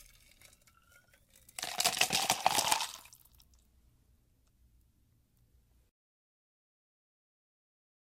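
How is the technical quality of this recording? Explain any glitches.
No technical glitches are audible.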